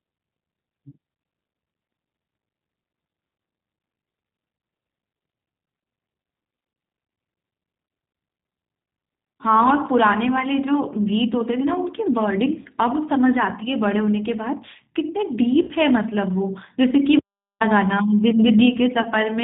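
The speech runs through the G.729 codec throughout, specifically G.729A at 8 kbit/s. Nothing above 4 kHz survives, and the pulse-based excitation rebuilt through a vocal tract filter gives the voice a plainly audible rough, synthetic texture. VoIP packet loss concealed by the speech codec occurs at 12.62–12.67 s (30 ms lost), 15.62–15.72 s (60 ms lost) and 19.02–19.09 s (30 ms lost). Each time the decoder extends its last pitch and filter state into a fading buzzy tone or coloured noise, and the voice stays weak or distorted just after while frame-to-frame prediction recovers. The 60 ms gap points to two consecutive lost packets. At 17.19–17.60 s there is an audio dropout to silence of about 415 ms: the sound cuts off mid-flow into silence with no room tone, likely from the input link or device briefly failing while recording continued.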